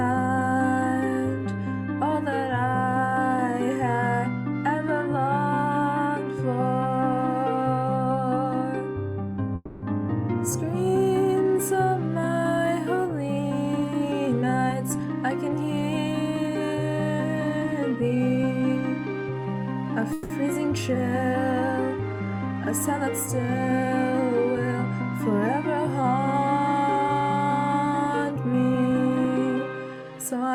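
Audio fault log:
9.55–9.84 s and 20.13–20.32 s: call audio freeze. The sound stalls and the last fragment is stretched into a fading buzz for about 270 ms, then about 170 ms, before resuming where it stopped. Nothing is lost, but the gap adds that much delay. The likely cause is packets held up in transit that drained the jitter buffer.
13.78–15.51 s, 17.39–19.46 s, 26.02–30.03 s: jitter buffer speed-up. The receiver trims short pitch-period slices repeatedly to shed excess delay held in the buffer. Playback runs about 9% fast in the first stretch and about 4% in the later two, removing roughly 0.1 to 0.15 s each. Pitch stays unchanged while the pacing sounds hurried in the first stretch.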